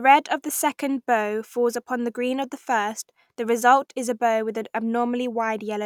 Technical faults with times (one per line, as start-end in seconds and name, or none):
none